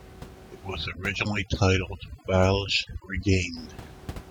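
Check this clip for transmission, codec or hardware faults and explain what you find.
One fault is present: overdone noise removal, from 0.86 s to 3.57 s. Across that stretch the background drops and breaks up into twinkling specks. A noise reduction stage set far too aggressively is cutting individual frequency bands to nothing whenever they sit near its noise estimate. The room noise, which otherwise stays about 18 dB below the speech, is taken down along with the quieter parts of the speech.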